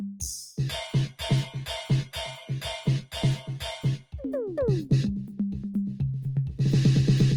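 Throughout the music, a noise suppressor applied to music is at work. Built for speech, it reads the music's steady, sustained parts as noise and keeps pulling them down by around 5 dB, so held tones and tails pump and thin while attacks mostly pass through.

From 3.98 to 4.13 s, the sound is cut by the noise suppressor. For this brief stretch of roughly 150 ms it judges the music to be noise and clamps down hard, by about 18 dB at its deepest, leaving a hole where the sustained sound sinks away before recovering.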